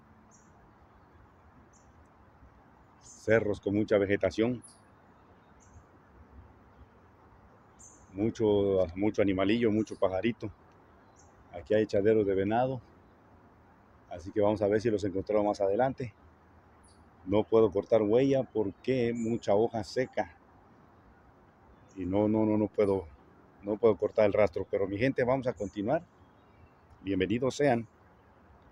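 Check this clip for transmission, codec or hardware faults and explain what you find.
No faults are audible.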